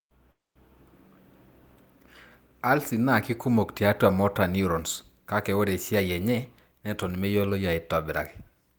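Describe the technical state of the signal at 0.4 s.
At 0.4 s the speech has broken off: the last sound is drawn out into a fading buzz that sinks toward near-silence, until the audio resumes at 0.57 s with the gap's content gone. This long network dropout, starting at 0.31 s, likely comes from packets failing to arrive, leaving the receiver to conceal about 240 ms of missing audio.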